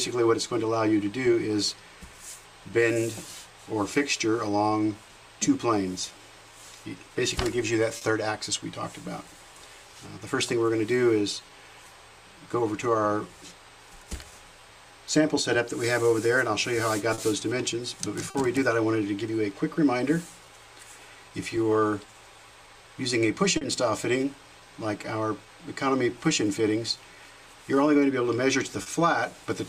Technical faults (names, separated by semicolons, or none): clock drift between sender and receiver; repeated timing corrections; short stall from a late packet